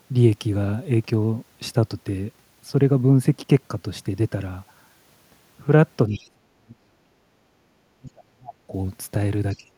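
A speech recording with echo-cancellation trouble in its later part. The canceller likely failed to separate the talker from loudspeaker echo during double talk, so it turned the speech down, by as much as about 40 dB, from 6.08 to 7.05 s, from 7.99 to 8.74 s, and from 9.53 s to the end. Between 6.12 and 6.21 s, residual echo that the canceller likely missed lets the other side's voice leak through, about 25 dB below the talker. From 7.33 to 7.71 s the echo canceller gated the background while the loudspeaker played, dipping the room sound by about 7 dB before it returns.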